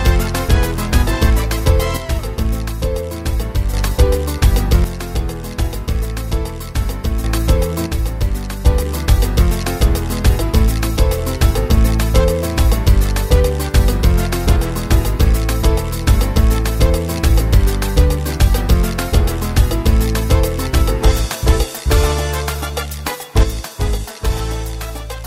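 One channel drops out from 1.97 to 3.74 s, 4.84 to 7.24 s, 7.86 to 8.66 s, and 23.43 s to the end. Each time the audio abruptly falls by about 6 dB, and the first three times it jumps back up at the boundary. The likely cause is one stereo channel going silent, so the mono sum keeps only half of the shared material and loses whatever lived in the missing side alone.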